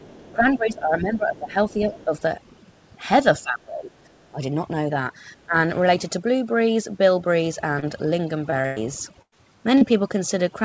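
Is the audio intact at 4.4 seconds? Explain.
No. Overdone noise removal runs through the whole clip, including 4.4 s: an overly aggressive noise reducer pulls individual frequency bands down or off whenever they sit near its noise estimate. Quieter speech components vanish with them, and the lowered background breaks into twinkling, warbling specks.

Just before that point, from 4.29 to 4.38 s, the speech dips by about 15 dB for roughly a tenth of a second. This is likely speech suppressed in double talk, where an echo canceller mistook the talker for loudspeaker echo and attenuated both.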